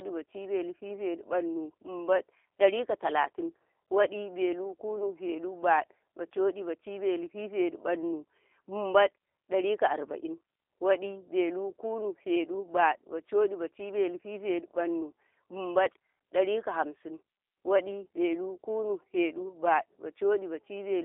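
Throughout, the speech has passed through a G.729 codec, which fits an 8 kbit/s VoIP link, rebuilding it from filter and pulse models: audio cuts off above 3.7 kHz, sounding rough and synthetic.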